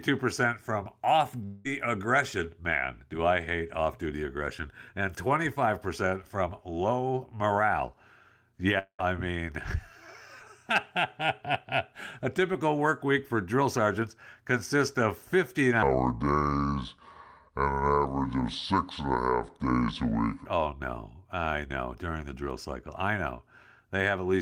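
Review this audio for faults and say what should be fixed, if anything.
Two gaps, at 1.45 to 1.67 s, just after "from off", and at 8.79 to 9.01 s, sound like a long network dropout, likely from packets arriving too late or not at all. About 0.2 s of speech is lost each time. The receiver stretches the last sound into a fading buzz, which in the second gap thins to roughly 60 ms of silence before the speech resumes past the missing part. A click or brief glitch leaves the content intact, but here the speech is actually skipped. A larger jitter buffer, or forward error correction on the link, would prevent it.

From 15.83 to 20.46 s the speech plays as a section at the wrong speed, likely because that stretch was rendered against a mismatched clock. It runs at 0.655 times normal speed, so the speech turns deep and slow, about 7 semitones lower, and returns to normal at the end of the section. 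A pitch-shift fault would lower the voice but keep the original pacing; here tempo and pitch drop together. Checking that the sample rate matches at every stage of editing and playback prevents it.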